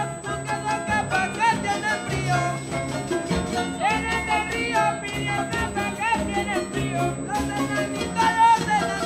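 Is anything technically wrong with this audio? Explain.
Yes, two things stand out.

There's USB whine running through the whole clip, a steady high tone at 8 kHz, roughly 20 dB below the audio. That pitch matches the 125 microsecond microframes the USB bus uses. Each microframe pulls a burst of current, and that ripple is getting into the audio path through shared power or ground. The result is a thin, fixed-pitch whistle that sits on top of everything and doesn't follow the material at all.

At 5.37 s the audio jumps forward, which sounds like compressed frames skipped. Something like 150 ms goes missing, which fits a handful of 24 ms frames being dropped, either because they weren't in the file or because the decoder rejected them as corrupt. The sound just resumes a bit further along.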